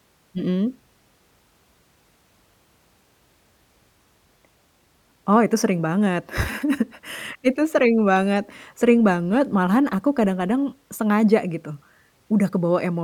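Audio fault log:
No technical faults are heard anywhere in the speech recording, and the signal stays steady and intact throughout.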